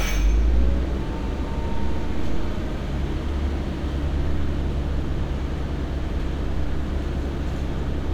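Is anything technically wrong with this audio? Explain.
No, nothing is technically wrong with this audio.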